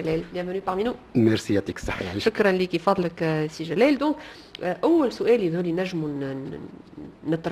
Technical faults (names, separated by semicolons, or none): none